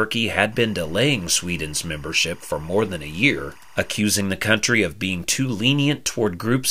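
From 0.52 to 3.99 s, a steady chirping warble sits well below the speech, flipping between pitches around 1 and 2 kHz. This is timecode bleed: a linear timecode signal, which fits 24-frame code, leaking in from an adjacent track or cable.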